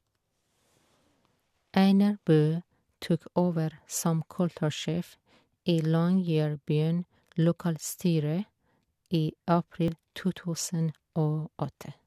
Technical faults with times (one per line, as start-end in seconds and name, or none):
7.89 overlap between stream segments
9.88 overlap between stream segments